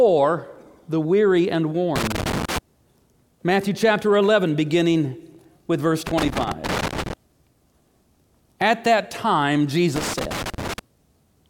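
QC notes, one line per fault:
1.96–2.58 s: loose connector crackle after "the weary and". A worn contact makes and breaks, chopping the signal into irregular scratchy bursts.
6.07–7.13 s: loose connector crackle after "beginning with verse". Same intermittent contact, longer burst.
9.96–10.79 s: loose connector crackle after "that time". Same chopping crackle.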